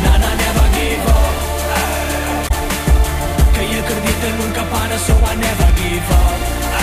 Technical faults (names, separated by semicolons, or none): damaged data in a compressed stream; bit error spike